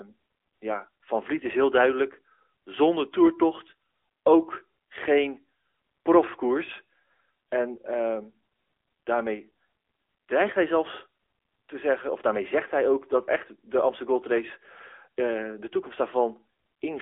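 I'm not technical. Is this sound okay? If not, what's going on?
No. AMR narrowband mobile codec, throughout the whole clip: the speech went through old-style mobile phone coding, which keeps only a narrow band of roughly 300 Hz to 3.5 kHz and cuts everything above 3.7 kHz, so it sounds muffled, thin and noticeably processed.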